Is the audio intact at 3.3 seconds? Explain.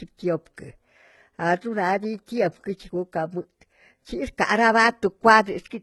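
No. Throughout the speech, the treble above 11.8 kHz is missing and the sibilants sound gritty and metallic, likely HE-AAC compression at a very low bitrate rebuilding treble from copied lower bands.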